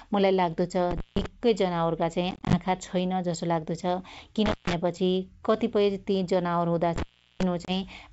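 At 0.91 to 1.26 s an intermittent contact opens for about 160 ms. A loose connection breaks the line and the speech drops to faint hiss with crackle at both edges. On a waveform it shows as a near-flat gap framed by sharp spikes, and on a spectrogram as a broadband click on each side of an empty band.

From 2.31 to 2.57 s comes packet loss on an ADPCM call. Around ten short holes, none longer than 20 ms and about 120 ms in all, are scattered over 220 ms. Each hole is silent and hard-edged. After each one the decoder's predictor and step size no longer match the sender's, so the speech returns slightly distorted. A spectrogram shows a comb of thin vertical gaps.

The intermittent contact returns at 4.46 to 4.73 s, with a gap of about 160 ms. It comes again at 6.96 to 7.43 s, this time lasting about 370 ms, the longest dropout with crackle.

A final ADPCM packet loss at 7.65 to 7.70 s removes about 30 ms. 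The speech resumes slightly distorted.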